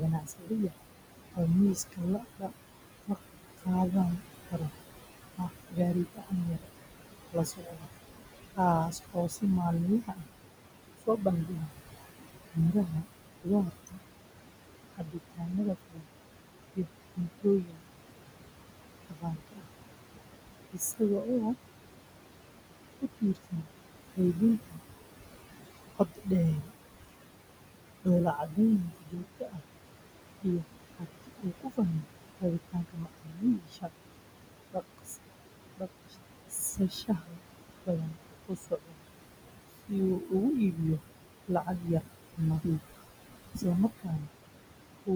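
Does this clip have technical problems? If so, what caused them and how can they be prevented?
Yes. Throughout, noise suppressor artifacts are audible: the background sinks between phrases and rises under them. The room noise sits only about 9 dB below the speech, so the suppressor works hard, pulling it down by about 21 dB frame by frame. A gentler suppression depth, or a quieter room, would prevent this.

Speech cut by the noise suppressor occurs from 0.0 to 14.0 s, 14.95 to 17.86 s, 19.01 to 21.57 s, 22.99 to 24.79 s, 25.96 to 26.69 s and 28.02 to 45.1 s. Soft consonants and word endings sound swallowed, dropped by about 21 to 22 dB because the suppressor mistook them for noise. Raising the speech level relative to the background, or lowering the suppressor's aggressiveness, would keep quiet speech from being cut.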